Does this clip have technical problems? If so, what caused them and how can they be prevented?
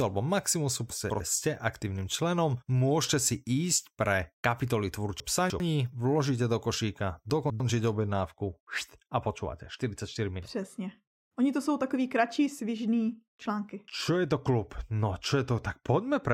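Yes. Chunks out of order: 100 ms chunks were delivered late, by two, three and two chunks, at 0.9–1.2 s (before "jste aktivním členom můžete"), 5.2–5.6 s and 7.3–7.6 s (after "do košíka"), so the sound jumbles. Prevent it with sequence-numbered chunks and a reordering jitter buffer.

De-emphasis applied wrongly: a treble cut was applied to audio that had no pre-emphasis, or was applied twice, from 7.97 s onward, sloping to about 13 dB down at 10 kHz versus 1 kHz, leaving it dull and muffled. Prevent it by matching de-emphasis to the pre-emphasis actually applied at the source.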